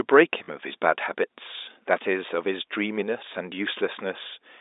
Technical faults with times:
0.44-0.48 packet loss with last packet repeated

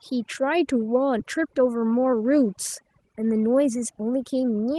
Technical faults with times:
0.00-4.78 overdone noise removal
1.19-1.21 skip ahead
1.38-2.22 jitter buffer speed-up
3.17-4.55 jitter buffer speed-up

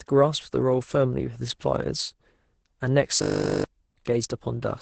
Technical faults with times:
0.00-4.81 Opus voice compression
3.22-3.64 system hang loop

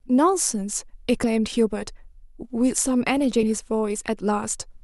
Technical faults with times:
1.23 compressed frames skipped
3.42 compressed frames skipped

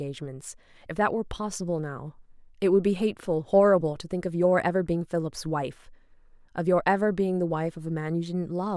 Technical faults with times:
none

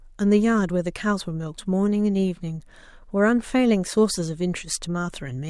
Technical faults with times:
none

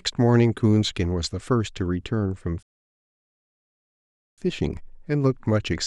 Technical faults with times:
2.63-4.38 rebuffering stall

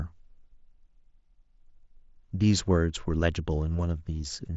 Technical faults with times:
none

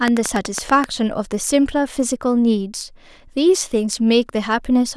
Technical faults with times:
0.08-0.85 train of clicks

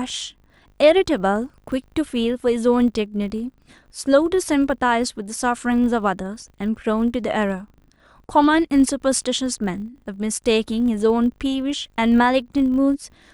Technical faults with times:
0.00-13.33 filter restarted on every block

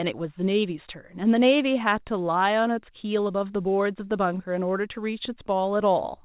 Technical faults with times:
4.38-4.41 short concealed packet loss

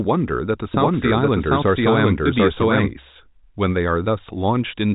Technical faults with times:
0.74-2.90 doubled audio track

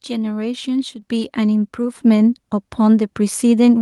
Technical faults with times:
1.02 microphone volume stepped up
2.04 microphone volume stepped up

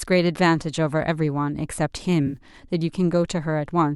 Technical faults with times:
2.26-2.37 AAC frame loss with concealment

